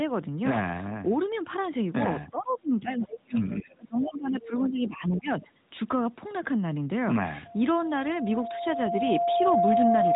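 At 3.11 to 3.16 s a faint, brief scrap of a second voice, roughly 15 dB below the main speech, slips through: other side's voice leaking through, likely loudspeaker echo from the far end that the echo canceller failed to fully remove.

From 3.54 to 5.58 s the talker's speech sinks for about two seconds, dropping by around 20 dB at its deepest. This is speech suppressed in double talk, likely with the echo canceller turning everything down while both sides were talking at once. The narrowband mobile codec's band limit near 3.8 kHz is audible throughout.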